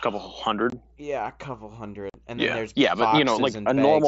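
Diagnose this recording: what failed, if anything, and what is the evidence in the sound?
Unconcealed Bluetooth headset packet loss on the mSBC wideband link dropped voice packets, leaving silence in their place. Gaps with hard edges open at 0.70–0.73 s (about 22 ms) and at 2.10–2.15 s (about 45 ms) after "a couple", consistent with three and six lost 7.5 ms frames.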